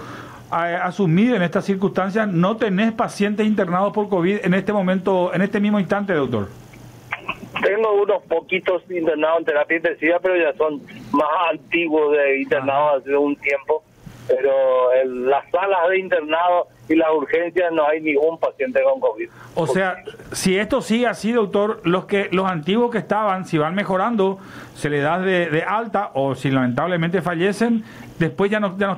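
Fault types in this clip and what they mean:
Gain pumping: All the way through, the gain is pulled down on each loud sound, swinging by around 20 dB, so everything sounds squashed. The likely cause is input gain set far too high, with a fast limiter clamping down.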